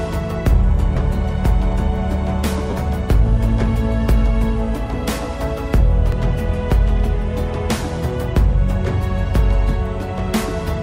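There are two brief dropouts from lost LE Audio frames. The first runs from about 0.95 to 0.97 s, with roughly 15 ms of audio gone, which fits two 7.5 ms LC3 frames. The second, from 2.70 to 2.73 s, is about 30 ms, roughly four frames. In each gap the decoder fills in by repeating the last good spectrum with scrambled phase, so any tonal content turns into a short, noisy smear instead of a clean cut.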